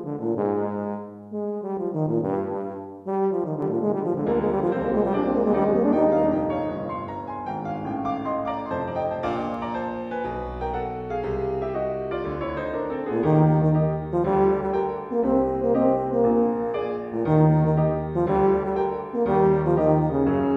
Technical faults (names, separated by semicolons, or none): doubled audio track